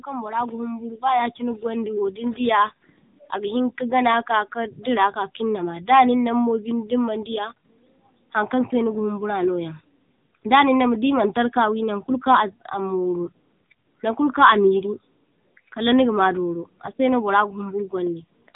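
From the very start and through the whole clip, the speech carries AMR narrowband mobile codec damage: a buzzy, synthetic vocal-tract model at a low bitrate, consistent with roughly 8 kbps. On a spectrogram everything above 3.8 kHz is empty, leaving a hard ceiling.

From 0.05 s to 9.76 s, automatic gain rising is heard. The gain control judged the input too quiet and lifted it steadily by about 10 dB, so the voice and background swell together. The waveform envelope widens gradually across those seconds.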